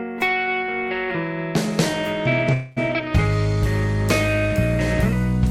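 At 2.53 to 2.79 s the music halts in a call audio freeze. Packets were likely delayed and the buffer ran dry. A fading buzz or hiss fills 231 ms, then the music resumes unchanged, shifted later.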